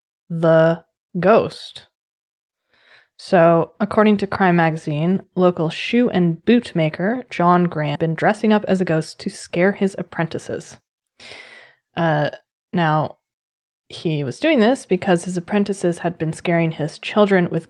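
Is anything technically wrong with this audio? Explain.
Yes, there are two related faults in this speech clip.

A skip ahead at 7.95 s drops roughly 0.4 s of speech. The jitter buffer, already holding later audio, discarded that stretch, so playback jumps straight across with no gap and the two sides are spliced almost directly.

A jitter buffer speed-up runs from 8.07 to 10.82 s. Still over its target, the buffer repeatedly trimmed pitch-period-sized pieces, about 0.15 s in total, so the speech plays at 105% speed at unchanged pitch and sounds slightly hurried.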